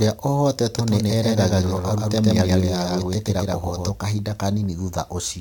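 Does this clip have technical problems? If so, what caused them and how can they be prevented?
Yes. From 0.79 to 3.91 s the speech has a dry, full-band echo trailing it by about 150 ms. The echo is roughly as loud as the original and starts and stops abruptly. This is a doubled audio track, likely caused by the same signal being captured twice through paths with different latency. To prevent it, route each source through a single capture path and mute any monitoring or loopback return feeding the recording.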